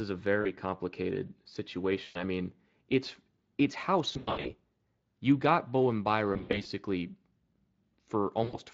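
Speech with VoIP packet loss concealed by the speech codec at 0.41–0.52, 2.03–2.17 (before "I mean it's it's"), 4.13–4.53 (after "I mean it's it's"), 6.33–6.67 and 8.43–8.57 s. Lost packets are bridged by extrapolated, fading buzz, and the voice stays weak briefly afterward.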